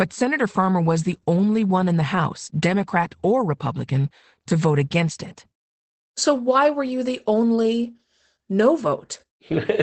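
Speech, carrying Opus voice compression for its whole length: a wideband SILK linear-prediction coder at a low rate, fitting about 12 kbps, leaves it muffled and hoarse. A spectrogram shows a hard ceiling near 8.7 kHz, with coarse, smeared detail below.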